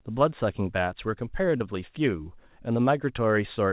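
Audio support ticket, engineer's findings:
Brief smear/wobble in the speech, 1.58 to 1.62 s; about 20 ms of audio missing. Short concealed packet loss: the packet never reached the decoder in time, so the decoder extended the preceding sound and crossfaded back into real audio.

Call path: band-limited, nothing above 4 kHz, consistent with a narrowband G.711 mu-law link at 64 kbps, with its usual coding noise.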